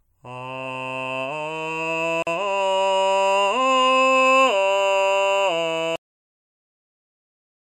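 At 2.22 s the music drops out for about 44 ms and resumes at 2.27 s, picking up exactly where it left off. This is a gap at a join of encoded pieces. The music appears to have been encoded in segments about 4 s long and joined without trimming, so the encoder's start-up delay and the padding of the previous segment's last frame both remain as dead air. On a waveform it shows as a narrow flat strip with abrupt but slightly smeared edges. On a spectrogram it is a thin vertical band empty across all frequencies.

At 5.96 s the music stops mid-sound. This is a cut-off end: the final buffers were never written, so nothing follows the cut. The sound does not fade or decay but falls straight to digital silence, which lasts until the clip ends. On a waveform the signal ends in a sheer vertical edge followed by a flat line. On a spectrogram every frequency band ends at once along a hard vertical boundary, with no tail.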